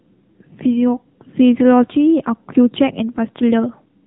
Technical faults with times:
0.00-4.07 AMR narrowband mobile codec

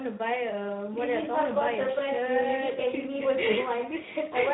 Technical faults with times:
0.00-4.53 Speex codec

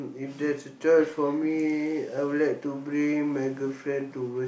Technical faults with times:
none

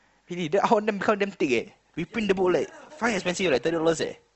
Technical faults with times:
1.58-4.35 adaptive stream at a lower bitrate

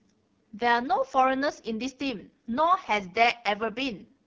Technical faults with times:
0.00-4.27 AMR wideband (HD Voice) codec

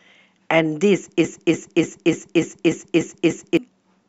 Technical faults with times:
1.25-3.57 broken-record loop

